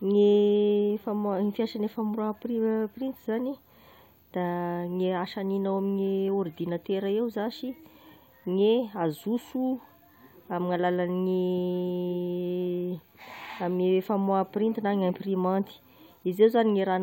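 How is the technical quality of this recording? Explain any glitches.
One glitch is audible in this speech recording. At 15.09 s, compressed frames are skipped. A short run of encoded frames never reaches the output, either lost from the file or rejected by the decoder as corrupt. Playback jumps forward by around 20 ms, a whole number of frames. The result is a tiny hiccup where a sliver of sound goes missing.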